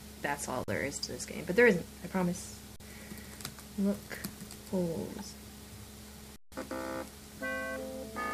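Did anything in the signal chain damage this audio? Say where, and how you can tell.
Yes. The damage is at the driver or buffer stage on the output side: an underrun with held sample, three times. At 0.64 to 0.68 s and 2.76 to 2.80 s the sound freezes flat for 40 ms, then for a longer 160 ms at 6.36 to 6.52 s. Each starts with barely a click, since the converter just holds its last value. Nothing seems skipped, so playback picks up where it stalled and the restarts are soft.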